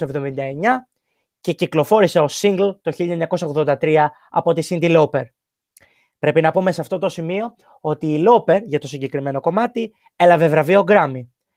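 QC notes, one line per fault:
No faults heard.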